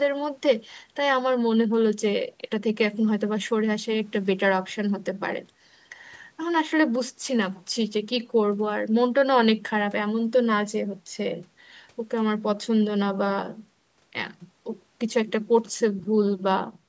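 Nothing stood out on listening to this speech, which carries the usual bass trim and 8 kHz upper limit of a call's microphone processing.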